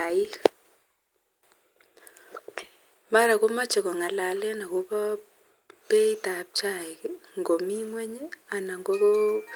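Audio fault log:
Nothing stood out on listening to the speech in this clip.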